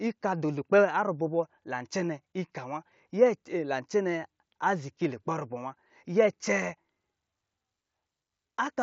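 Nothing's wrong here: it's just speech coming through the usual Bluetooth mSBC headset path, with that codec's light touch audible on the sound.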